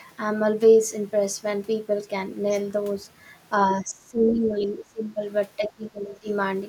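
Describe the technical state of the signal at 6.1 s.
At 6.1 s you're inside a stretch of speech suppressed in double talk, running from 5.57 to 6.29 s. The speech dips hard, by around 20 dB at its deepest, most likely because an echo canceller couldn't separate the talker from loudspeaker echo and turned both down.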